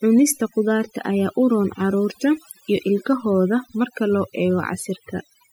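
The whole recording shows overdone noise removal. A noise reduction stage was set too hard. It cut individual frequency bands deeply wherever they sat near its noise estimate. Quiet parts of the speech went too. The background is near silence with twinkling specks.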